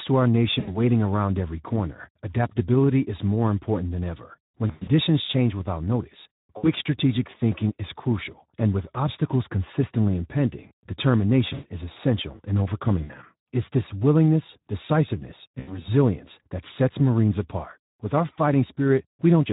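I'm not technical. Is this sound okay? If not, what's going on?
No. The whole recording sounds rough, hoarse and fizzy, like an old internet call or game chat. That is the Speex codec, a speech compressor squeezing the voice into very little data. It has too little to rebuild it cleanly, so this damage is plainly audible.

There are also six short moments where the voice smears into a buzzy or noisy, fading sound and stays weak briefly afterwards: at 0.59 s, 4.67 s (just before "change without notice"), 6.57 s, 11.53 s (just before "is essential in"), 13.03 s and 15.59 s. This is VoIP packet loss concealed by the speech codec. Pieces of the call went missing, and the decoder guessed at them by stretching out the last sound it had.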